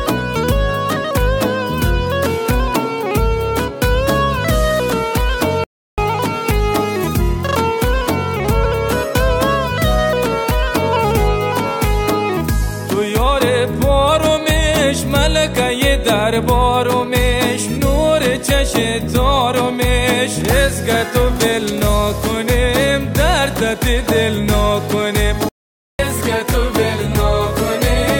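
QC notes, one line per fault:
5.64–5.98 s and 25.49–25.99 s, playback stall: the audio drops to silence mid-flow for about 340 ms, then about 500 ms, and resumes afterwards. This is likely the player running short of data or its output thread being blocked until it recovered.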